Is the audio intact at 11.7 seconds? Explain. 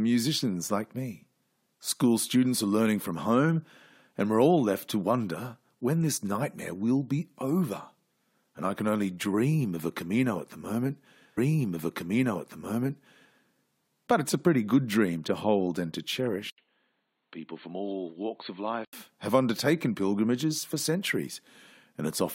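No. A stream segment repeated runs from 11.37 to 13.36 s, right after "at the moment". The player fetched or queued the same chunk of the stream twice, so about 2.0 s of the speech plays a second time and the clip runs that much longer. At 11.37 s there is a small blip where playback jumps back, and the passage just heard then replays in full before the programme continues.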